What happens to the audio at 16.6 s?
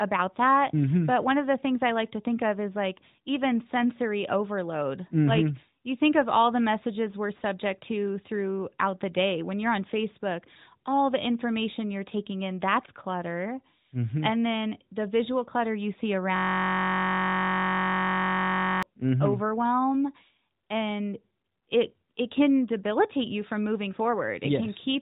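A system hang loop runs from 16.36 to 18.83 s, right after "visual clutter you see": a 21.33 ms buffer repeats, giving a steady 46.9 Hz buzz consistent with a 1024-sample buffer.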